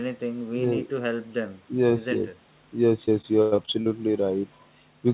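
From 3.06 s to 3.88 s the speech breaks up with repeated packet loss, producing a robotic sound. Seven separate gaps fall within this stretch, the longest about 103 ms, and each is covered by extending the preceding audio, so roughly 29% of the span is synthetic fill. The stacked repairs give a choppy texture with fragments missing. Throughout, the band stops at 4 kHz, consistent with a G.711 mu-law call path.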